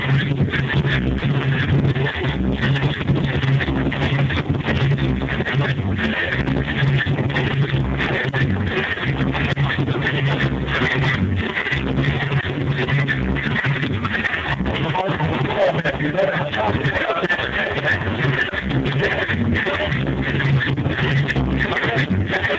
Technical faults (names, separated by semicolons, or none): sound dropped by the voice detector